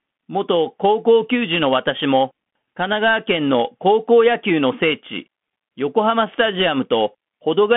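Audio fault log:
Throughout, Bluetooth CVSD headset codec: speech is confined to about 150 Hz–3.4 kHz, with nothing above 3.7 kHz. One-bit slope coding, fitting a 64 kbit/s stream, leaves plainly audible damage.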